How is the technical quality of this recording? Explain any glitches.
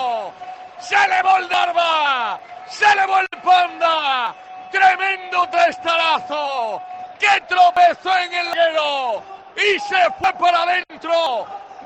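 The recording is marred by repeated skips. At 1.54, 2.39, 4.27, 7.77, 8.53, 10.24 and 11.26 s the sound jumps ahead, losing roughly a tenth of a second at most of them, about 0.15 s at 8.53 and 11.26 s, nearer a third at 1.54 s. Unlike a dropout, no silence fills the gap. That points to a likely dropped buffer (overrun), where audio was overwritten before capture.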